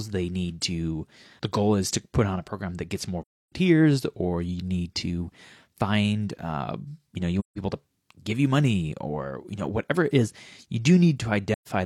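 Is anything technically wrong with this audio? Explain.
Yes. AAC frame loss with muting occurs at 3.22 to 3.52 s after "program that gets more", 7.39 to 7.58 s between "uh you know you" and "to give you money", and 11.53 to 11.68 s. The decoder zeroes the missing spectrum, and overlapping windows fade the speech smoothly into gaps of 0.3, 0.17 and 0.13 s.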